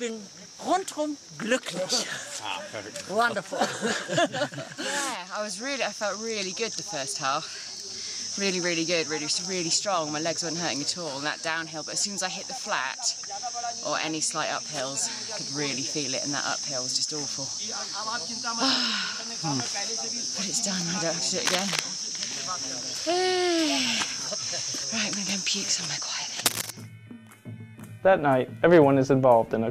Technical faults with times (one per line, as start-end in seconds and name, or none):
21.45-21.80 cable scratch noise
26.45-26.70 cable scratch noise